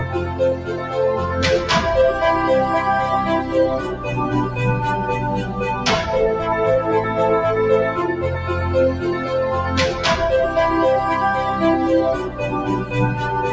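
A speech-tuned noise suppressor was left on this non-speech audio throughout. It treats steady parts as noise, so the level pumps by around 5 dB. From 0.25 to 0.93 s, sound is cut by the noise suppressor for roughly half a second, dipping about 8 dB. At 5.43 to 5.58 s it sinks about 5 dB. Held parts and decays are pulled down while sudden onsets pass. The call microphone processing also limits the top end, with nothing above 8 kHz.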